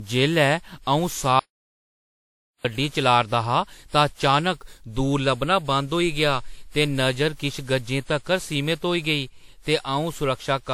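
Right from the start the speech has that swirly, hollow, smeared quality of generation loss, with soft attacks and nothing above 19.6 kHz. It's more damage than one pass would do, so it was likely re-encoded around ten times, which fits WMA at roughly 96 kbit/s.

Then from 1.39 to 2.65 s there's an audio dropout to silence: about 1.25 s of dead silence, no room tone at all, cutting in and out mid-flow. That likely means the input was lost while the recorder kept writing.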